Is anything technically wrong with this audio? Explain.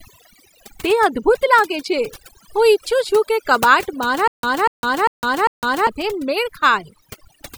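Yes, there are two faults in this speech.

Overdone noise removal runs through the whole clip. The noise reduction was set too aggressively, so frequency bands near the noise estimate are pulled almost to nothing, along with quieter parts of the voice. The background drops and breaks up into twinkling specks.

Stutter with silent gaps runs from 4.28 to 5.87 s, right after "કે કબાટ". The likely cause is stalled playback, where each retry replays the last fragment and then runs dry. A 243 ms burst repeats 4 times, with 156 ms of digital silence between repeats, a steady cycle of about 399 ms. The speech that belonged in that span is lost.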